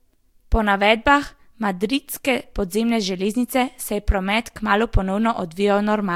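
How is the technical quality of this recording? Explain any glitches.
The technical quality holds up, with no glitches to explain anywhere in the recording.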